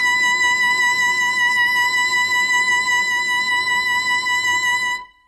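Throughout the music, the treble sounds gritty and metallic, with nothing above 11.7 kHz, likely HE-AAC compression near 16 kbps. A spectrogram shows a hard ceiling over copied-looking upper bands.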